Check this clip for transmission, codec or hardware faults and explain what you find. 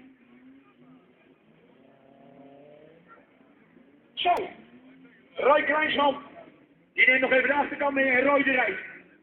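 One transmission or hardware fault stands out: a repeated buffer at 4.37 s. New audio failed to reach the output in time, so the device replayed its last block, about 1.45 ms long, which fits a 64-sample buffer. That block plays three extra times, with a hard join at each repeat, and a few milliseconds of audio are lost. Because the block is so small, the result is a brief click or tiny buzz rather than an audible stutter.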